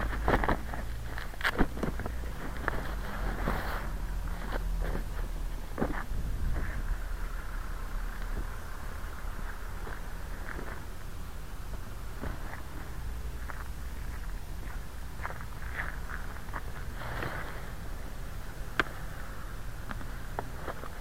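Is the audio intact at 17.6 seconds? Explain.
Yes, the audio is intact at 17.6 seconds, with no dropout, click, distortion or other fault at that moment.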